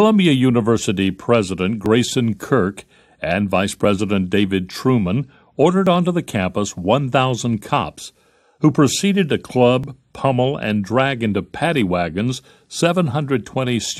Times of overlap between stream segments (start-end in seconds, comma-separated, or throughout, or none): 1.86, 3.85, 5.87, 9.84, 11.81